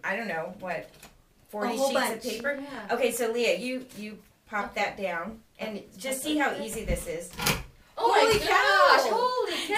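From 2.05 to 3.18 s a rapid ticking sits on top of the sound: a train of clicks, about ten of them, arriving at roughly 9 per second but at an uneven pace, each one peaking about as loud as the audio itself. The pulses share much the same sharp shape, which likely points to an outside source such as interference from nearby equipment or a faulty connection or power supply briefly injecting spikes into the signal.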